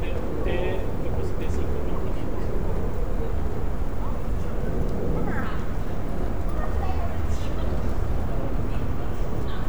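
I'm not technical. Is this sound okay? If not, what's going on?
Yes, nothing wrong can be heard in this sound at any point.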